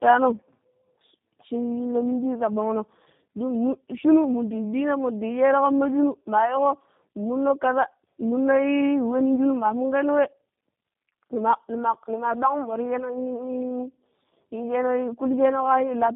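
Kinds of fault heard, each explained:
Tandem speech coding: the speech passed through two G.729A low-rate coders with a G.711 link between them, so it sounds rough and warbly. Nothing is heard above 3.6 kHz.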